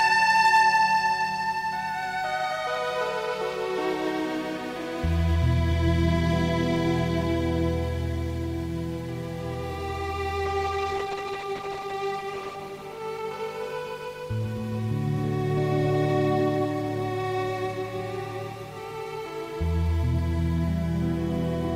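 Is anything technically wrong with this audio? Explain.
Yes, two problems stand out.

From 0.01 to 0.77 s there is hard clipping. The signal runs about 5 dB past what one stage in the chain can pass, so the peaks are sliced off. On a waveform the loudest cycles show flat plateaus at the ceiling. On a spectrogram the squared-off tops throw energy high up the spectrum as vertical smears on each peak. The result is a gritty crackle riding the loud moments.

From 10.47 to 14.63 s a call bitrate drop sets in. The connection's estimate of available bandwidth fell, and the encoder was pushed to spend far fewer bits. The sound points to a fall from around 40 kbps to roughly 12 kbps, with the worst stretch lasting about 1.6 s. Coarser coding makes the audio rough and watery, and the top end is trimmed away. On a spectrogram the upper band goes dark above a clear cutoff and detail turns blotchy until the rate recovers.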